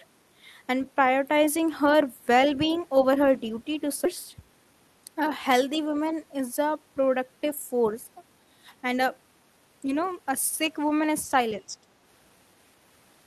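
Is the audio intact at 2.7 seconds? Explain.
No. From 2.73 to 2.80 s the other side's voice leaks through as a brief, faint scrap well below the talker, likely far-end playback the echo canceller missed. Unlike a delayed copy of the talker's own sound, it is a separate voice.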